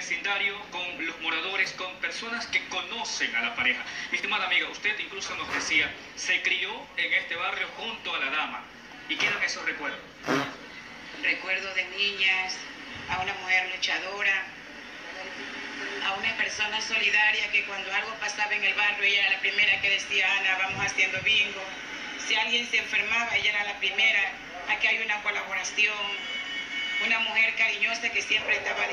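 At 23.42 s a single loud pop cuts in, standing out noticeably above the surrounding sound for about 20 ms. It is likely caused by a voltage pulse, such as a plug, switch or static discharge, entering the signal path and being shaped by the circuits after it. Unlike a dropout or an edit glitch, nothing is lost: the sound carries on unbroken underneath, with just one brief pop laid on top.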